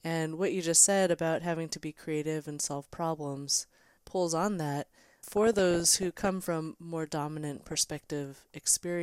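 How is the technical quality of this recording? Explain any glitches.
The speech carries two bursts of DAB burbling, from 5.31 to 6.28 s, just after "problems pulls on that", and from 7.55 to 8.12 s, right after "from more". Weak reception let bit errors, around half a percent of bits in the first burst and 0.7 percent in the second, slip past error correction into the MP2 data. Corrupted samples put short blips of noise in single sub-bands, and corrupted scale factors make individual sub-bands leap in level for up to a frame, producing burbling over the voice.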